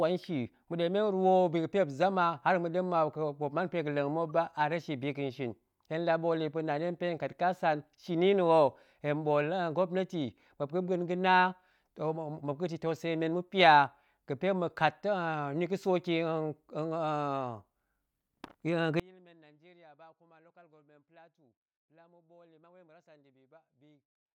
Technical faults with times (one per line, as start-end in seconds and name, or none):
4.29-4.35 corrupt frame decoded
19.00-24.34 one channel inverted